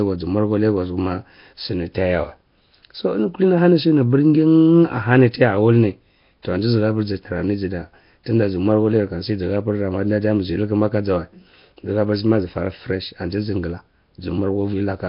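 Speech runs throughout with a rough, hissy halo and smeared, underwater quality, and nothing above 5.3 kHz: heavy Nellymoser compression, likely Flash-era Nellymoser Asao coding at a rate pointing to roughly 22 kbps.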